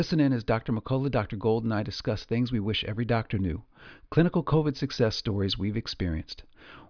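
No technical faults can be heard anywhere in this recording.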